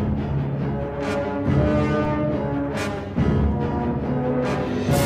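At 2.05 s the waveform's zero line suddenly jumps, a DC step of about -29 dBFS, as if an offset had been switched into the signal path. The offset then drains away through a high-pass of about 5 Hz. It is heard as a single low thump or click, and the sound carries on unchanged through it. Unlike a dropout, nothing is lost or cut.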